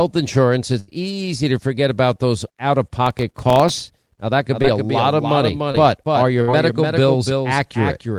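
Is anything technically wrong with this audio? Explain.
Yes, there are four kinds of fault.

Burst of packet loss, at 0.79 to 0.90 s (just before "easy to forget about") and at 6.42 to 6.50 s: a run of packets arrived too late, so the receiver stretched the last sound and faded it. About 80 ms and 60 ms of audio are missing, heard as a held, dimming tail and then a jump forward.

Processor overload crackle, from 3.06 to 4.14 s, right after "about those out of": the processor repeatedly missed its deadlines for very short buffers, which points to buffers under a millisecond long. A few dozen misses each left a hard-edged silent gap, and together they form a gritty crackle over the sound.

Doubled audio track, from 4.51 s to the end: a second full-band copy sits roughly a third of a second behind and a few dB quieter, likely from the audio being captured again through a slower path. It enters abruptly and adds a dry echo with no room colour.

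Short concealed packet loss, at 4.62 to 4.65 s and 5.72 to 5.76 s: about 20 ms of audio failed to reach the decoder each time. The receiver covered each gap by continuing the preceding sound and blending back into the real audio, which is heard as a brief smear or wobble.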